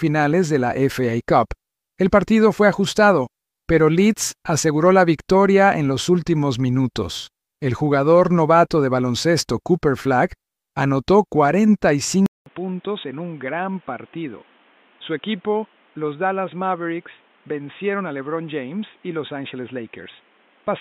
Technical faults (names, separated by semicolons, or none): input switched to a poorer device